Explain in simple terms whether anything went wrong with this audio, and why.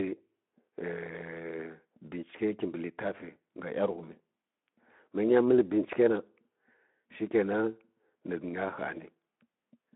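Nothing went wrong in this recording. It passes through the Speex speech codec in the ordinary way, so the speech sounds a little narrow and phone-like, with only a light coarseness from the compression.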